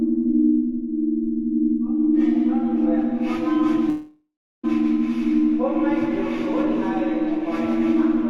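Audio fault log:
3.89–4.65 s, call audio freeze: the sound stalls and its last moment is drawn out into a fading buzz that sinks into about 0.36 s of silence. It then resumes exactly where it stopped, with nothing skipped, so everything after arrives about 0.74 s later than it should. This is likely packets held up in transit, leaving the jitter buffer empty while the receiver padded the gap until delivery caught up.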